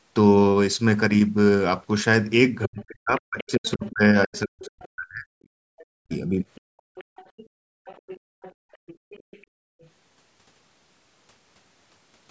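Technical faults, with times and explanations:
2.63–4.88 s and 5.78–9.89 s, other side's voice leaking through: a second voice sits under the speech, around 15 dB down in the first stretch and nearer 25 dB down in the second. This is likely loudspeaker echo the canceller failed to remove. On a spectrogram it shows as faint, broken harmonic traces that don't follow the main talker's pitch.
2.67–5.32 s and 5.93–6.45 s, speech suppressed in double talk: the talker's level dips sharply and in pieces, up to about 40 dB at its deepest. About two seconds are affected in the first span and under half a second in the second. Likely cause: the canceller could not separate the talker from the echo and turned both down. The waveform shows chopped, hollowed envelopes, and the spectrogram shows gaps and missing upper harmonics.
5.60–5.65 s, 6.69–8.78 s and 9.48–9.74 s, background gated by the echo canceller: the room tone drops out while the far side plays, by about 40 dB, about 32 dB and about 31 dB. 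The first dip is very brief, about a second is affected in total in the long span, and the last lasts about 0.2 s. The noise floor then snaps back when the canceller releases. On a spectrogram the faint background wash turns to near-black blocks with abrupt edges.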